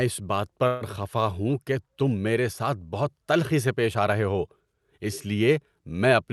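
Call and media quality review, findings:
Call audio freeze, 0.67–0.83 s, after "اس بات", before "خفا ہوں کہ تم": speech stalls into a fading buzz-like continuation for about 136 ms, no silence. Likely jitter buffer underrun from delayed packets. Speech resumes where it stopped, nothing dropped, so the delay grows about 136 ms. Opus-style call coding audible, top end near 12 kHz.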